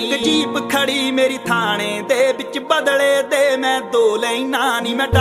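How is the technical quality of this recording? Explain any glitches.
Nothing here trips the ear: no dropouts, clicks or odd jumps turn up anywhere in the recording, so there are no glitches to explain.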